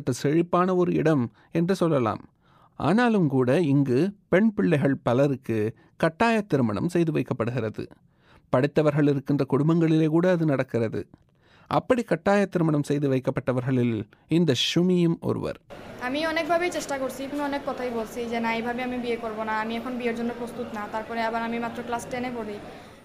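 No technical faults are audible anywhere in this audio.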